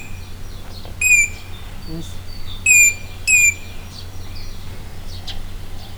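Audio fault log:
No faults are heard anywhere in the clip. The 8-bit storage comes through as a faint grainy floor of rounding noise well below full scale, which is what that bit depth sounds like when it is read correctly.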